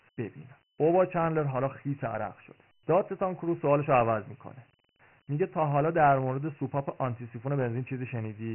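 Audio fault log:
throughout, Dialogic VOX ADPCM: the speech was squeezed through 4-bit adaptive differential coding, which fits a 6,000-samples-per-second OKI-style stream at around 24 kbps, so nothing survives above 3 kHz and consonants lose their edge. Each sample stores only a coarse step from the last, and the step size chases the signal too slowly, leaving heavy damage: a gritty, granular hiss that rides along with every stretch of speech and swells on louder syllables.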